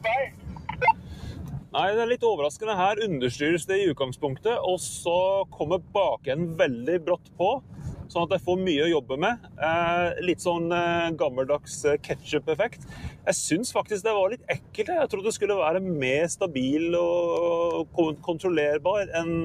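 A noise suppressor built for speech is left running across the whole clip and treats steady parts of the sound as noise, swinging the level by around 10 dB. Attacks pass while sustained material and tails sink, which separates it from compressor pumping, where loud onsets drive the dips.

Sound cut by the noise suppressor falls by up to about 11 dB at 0.0–1.74, 5.45–6.27, 7.17–8.15, 9.01–9.61, 11.59–12.28, 12.69–13.27, 14.37–14.82 and 17.84–18.28 s. Level fades rather than vanishing outright, unlike a dropout.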